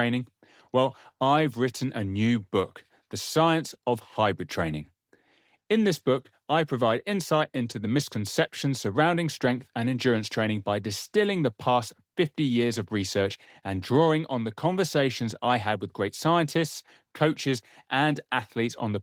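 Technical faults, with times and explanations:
No technical faults are heard in this clip.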